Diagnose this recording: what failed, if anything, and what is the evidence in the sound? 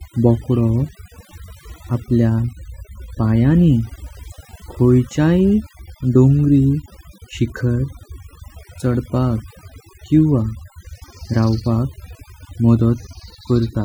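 Overdone noise removal, at the call-processing stage, affects the whole speech recording. Between phrases the background drops to near silence, dotted with twinkling specks. The suppressor was set too strong. It cut frequency bands near its noise estimate, taking quiet parts of the voice with them.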